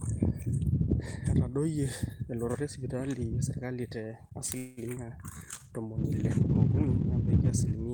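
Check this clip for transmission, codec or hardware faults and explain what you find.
Four faults cluster in the second half of the speech, between 4.57 s and the end.

From 4.57 to 4.80 s there is a call audio freeze. For about 195 ms the last sound is drawn out into a buzzy tone that fades without reaching silence. The audio then resumes where it stopped, so nothing is lost, but everything after arrives 195 ms later. The likely cause is delayed packets draining the jitter buffer. On a spectrogram this appears as a smeared horizontal band with no new onsets.

At 4.95 to 5.00 s there is a short concealed packet loss. About 60 ms of audio never reached the decoder. Only about 16 ms of it was patched by extending the preceding sound, and the rest was dropped, so the timeline shortens by roughly 40 ms. It is heard as a quick smear or wobble, and the waveform shows a small discontinuity.

From 5.34 s to the end there is a call bitrate drop from 32 to 18 kbps, held at the lowest rate for 2.44 s. 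With fewer bits, the encoder quantises coarsely and trims the top band. The sound becomes muffled and watery, and the spectrogram loses its upper energy above a clear ceiling.

From 5.37 to 5.64 s there is a jitter buffer slow-down. To rebuild its reserve, the receiver repeated individual pitch periods, adding 64 ms and playing at about 80% speed with the pitch unchanged. Sounds stretch. The waveform shows repeated, near-identical cycles, and the spectrogram shows elongated harmonics.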